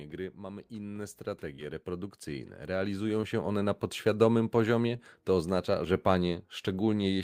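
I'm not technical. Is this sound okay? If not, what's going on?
No, there are two things going on.

The first is automatic gain rising. From about 0.38 s to 3.84 s, the system decided the sound was too quiet and turned it up bit by bit. So the voice and any background noise get louder together, slowly, over those few seconds, not in one jump. It's the call's own volume control adjusting, not the person speaking louder.

The second is short concealed packet loss, which happens three times: 1.55 to 1.60 s, 3.21 to 3.25 s, and 4.97 to 5.01 s. Each time, about two hundredths of a second of the call didn't arrive in time. The receiving end patched the gap by stretching out the sound that came just before, then blended back into the real audio. You may hear each one as a tiny smear or wobble.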